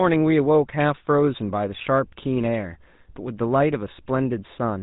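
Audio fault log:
Throughout, GSM full-rate codec: buzzy, gravelly roughness on the speech. The vocal tract is modelled and driven by sparse regular pulses. Nothing passes above 3.8 kHz.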